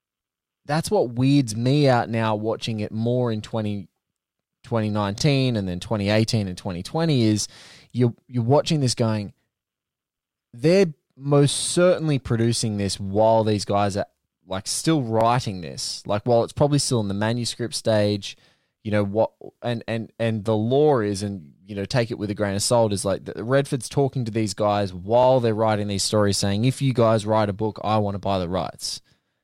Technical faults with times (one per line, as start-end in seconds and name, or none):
5.18-5.21 overlapping chunks
15.21-15.23 overlapping chunks
25.23-25.26 overlapping chunks